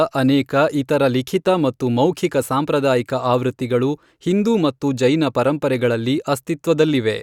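Nothing goes wrong anywhere in this bit of speech; there's no fault to point to at any moment.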